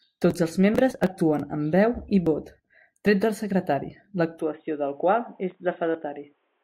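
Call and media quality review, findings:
Input switched to a poorer device from 4.40 s, after "vot tret del secretari", to end. Speech goes dull and boxy: nothing above 3.8 kHz, about 5 dB quieter, faint new noise floor, no gap. Likely headset call profile or narrowband mic.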